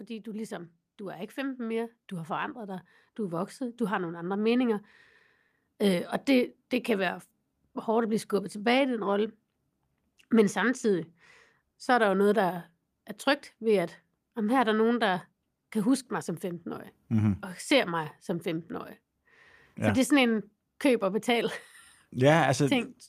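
A speech recording with automatic gain rising from 0.08 s to 8.6 s: the gain control judged the input too quiet and climbed about 10 dB. Unlike a talker moving closer, the background noise swells along with the voice, slowly and steadily rather than pumping.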